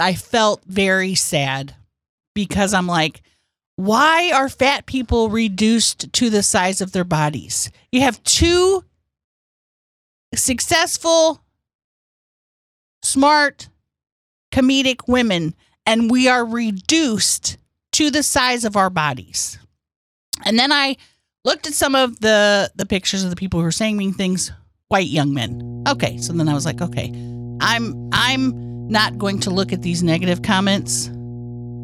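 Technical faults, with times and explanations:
25.47–31.83 s, mains hum: a steady 60 Hz tone with low harmonics appears under the speech, roughly 10 dB below it, from power-line coupling through a ground loop or nearby transformer.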